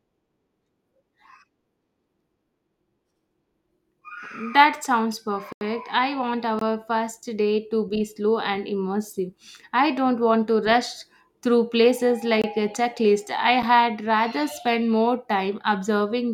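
At 5.53 to 5.61 s the speech drops into a block of digital silence for about 85 ms, a hard hole that fits a 4096-sample buffer going unfilled. Shorter dropouts of about 21 ms each, consistent with 1024-sample blocks, follow at 6.59 s and 12.42 s (just after "through places"), with an 8 ms one at 13.62 s. The audio cuts straight to silence and back with no fade. The long gap reads as a hole, the 8 ms one as a tick.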